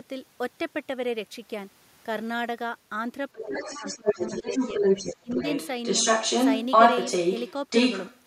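Speech suppressed in double talk first appears from 3.33 to 3.84 s, where the talker's speech dips by roughly 15 dB while a second voice starts underneath it. The likely cause is an echo canceller that could not tell the near talker from its own loudspeaker echo while both were active, so it turned everything down. The same suppression returns from 4.01 to 4.45 s with a shallower dip of around 10 dB. At 5.2 to 5.3 s it becomes a brief dropout of about 25 dB.

The other side's voice leaking through runs from 3.43 to 7.53 s and again from 7.7 to 8.23 s. It is a second voice in the background, within roughly 5 dB of the talker in the first stretch and within about 10 dB in the second. It is likely loudspeaker playback that reached the microphone and was only partly removed by the echo cancellation, so the residue stays audible alongside the talker.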